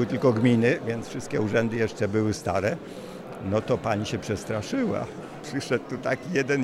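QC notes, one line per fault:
No faults to note.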